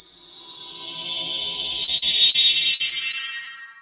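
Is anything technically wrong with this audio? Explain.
Yes. There are two kinds of packet loss in the audio, heard through a narrowband call path with nothing above 4 kHz.

Short concealed packet loss occurs three times: at 1.84 s, 1.97 s and 2.30 s. In each case about 40 ms of audio never arrived in time. The receiver covered each hole by extending the preceding sound, using its pitch or shaped noise, and then faded back into the real signal. Each one sounds like a brief smear or wobble, and a short transient can drop out.

Repeated packet loss (robotic sound) runs from 2.74 s to 3.49 s. Four separate gaps fall within this stretch. Together they remove about 120 ms of audio, and the longest gap is 56 ms. About 14 percent of the span is synthetic fill. The next hole follows soon after each patch. The sound turns choppy, with pieces missing. The 4 kHz ceiling fits a G.711 mu-law codec at 64 kbps.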